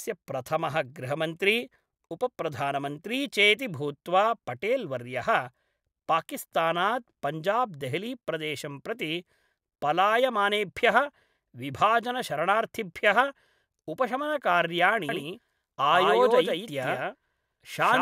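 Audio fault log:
15.09 s to end: doubled audio track. From 15.09 s the speech is joined by a second full-band copy trailing about 150 ms behind at roughly 5 dB lower, entering abruptly with no decay or room colouring, likely from a slower second capture path.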